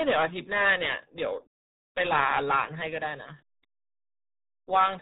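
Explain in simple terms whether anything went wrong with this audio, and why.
Yes. From start to finish the speech sounds muffled and gargly, with everything above about 3.8 kHz missing. That is the RealAudio 14.4 codec, an old dial-up-era format that squeezed audio so hard it throws away the highs and smears what remains.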